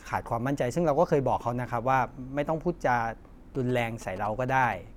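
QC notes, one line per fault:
3.55 to 4.74 s, GSM signalling bursts. A galloping dit-dit-dit of short buzzes sits under the speech, roughly 15 dB below it. A nearby 2G phone is signalling in brief radio bursts. The audio circuit rectifies them, giving a buzz at about 217 Hz.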